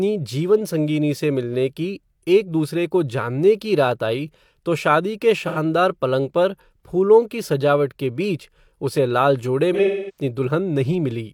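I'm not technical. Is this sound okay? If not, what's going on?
No. AAC frame loss with concealment: small chunks of compressed audio went missing and the player filled the gaps by guessing. At 5.47 to 5.58 s, after "आई तो शादी के", it sounds smeared. At 9.73 to 10.23 s, after "बीच उसे लाल जोडे", it fades to a very faint hiss and back for about a third of a second.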